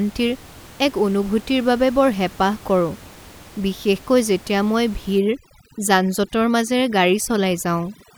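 Speech with overdone noise removal from 5.19 s to the end, where an over-aggressive noise reducer cuts bands near its noise estimate, leaving twinkling near-silence; room noise sits about 23 dB below the speech.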